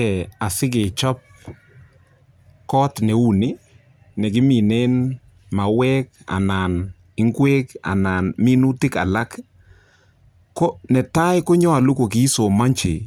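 Listening closely to the speech, nothing stood out as a technical fault at any point.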